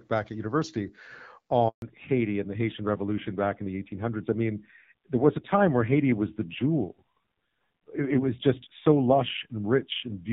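A handover gap opens at 1.68 s and lasts 140 ms, until 1.82 s. While the call was passed from one network to another, no speech frames reached the receiver. The sound fades within a few tens of milliseconds and then stays silent until the new link begins delivering audio. Whatever was said during those 140 ms is gone, leaving a short hole in the middle of the flow.

A fallback to narrowband follows at 1.82 s and lasts to the end of the clip. Before the break, the speech has the fuller top end of AMR wideband (HD Voice) coding, lightly marked by the codec and consistent with a rate around 12.65 kbit/s. Once the new link starts, the codec drops to an older narrowband mode, which fits AMR-NB at about 5.9 kbit/s. Nothing above 4 kHz remains, so the speech turns duller and more muffled, with a rougher texture from the lower-rate coding.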